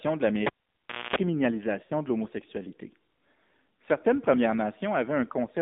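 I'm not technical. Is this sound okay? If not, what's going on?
No, there are three problems.

First, the whole clip went through the AMR narrowband mobile codec, the speech codec used on older mobile phone calls. It keeps only a narrow slice of the sound, roughly 200 Hz to 3.7 kHz. Everything brighter or deeper is gone. It also rebuilds the voice from a simple model instead of sending the real sound, so the damage is plainly audible. The voice sounds boxed-in and somewhat artificial.

Second, from 0.47 to 1.16 s there is a cable pulled and plugged in. A live cable came out and went back in. You hear a pop, then the sound drops out for about 0.64 s. During that gap there is a burst of mains buzz lasting about 0.24 s, a low 60 Hz hum from the half-touching plug. A second pop follows when the sound returns.

Third, from 1.84 to 1.92 s there are lost AMR speech frames, just before "de l'homosexualité". 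About 60 ms of the signal never arrived. The phone filled the gap by stretching the last good sound and letting it fade out. You hear the voice drawn out and sinking toward silence before it returns. It comes back briefly weak or rough.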